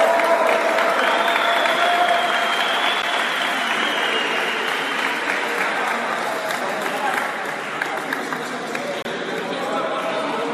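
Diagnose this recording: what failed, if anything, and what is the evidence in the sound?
Playback stage: a gap between stream segments. Hard-edged silences break the sound at 3.02 s and from 9.02 to 9.05 s. They fall six seconds apart, matching 6-second segments. Segment timestamps leave holes of 11.9 ms and 27.3 ms. The player fills them with silence. No audio is lost.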